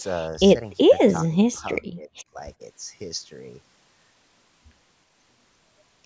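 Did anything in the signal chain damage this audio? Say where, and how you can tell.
Yes, at the call-processing stage. The speech ducks slightly at 0.47–0.51 s, about 35 dB at 0.83–0.92 s, and about 25 dB in pieces across 1.39–2.39 s. This is likely speech suppressed in double talk: the echo canceller attenuated the near talker along with the echo. Packet loss would leave abrupt gaps instead of this level ducking.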